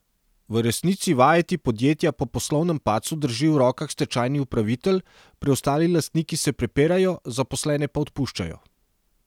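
Nothing in this recording stands out as a technical fault; the speech runs along without any drop, glitch or break to point to.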